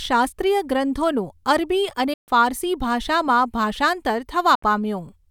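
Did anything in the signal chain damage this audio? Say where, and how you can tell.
Yes. The speech cuts to silence twice, from 2.13 to 2.28 s and again from 4.55 to 4.63 s. When it returns it has skipped ahead, losing about 140 ms and then about 70 ms rather than pausing and picking up where it stopped. That points to the wireless playback link, likely a Bluetooth dropout, where late packets get discarded and the headphones output nothing until fresh ones arrive.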